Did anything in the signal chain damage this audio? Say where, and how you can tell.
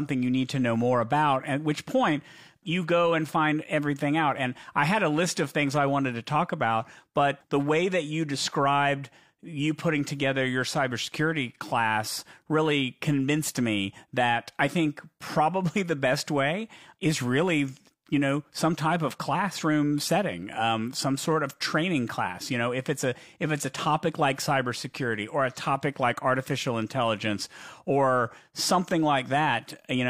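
No, no faults detected.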